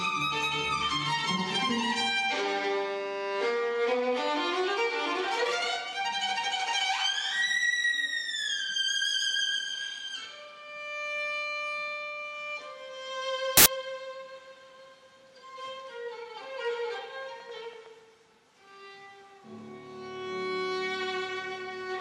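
Samples built from the wrong bytes appear from 13.57 to 13.66 s, a burst of about 90 ms. For that stretch the reader assembles each sample from mismatched bytes, whether shifted by one, swapped in order or misaligned, so the rapidly varying low-order bits land in the most significant position. The result is a sudden blast of loud, harsh broadband noise replacing the sound.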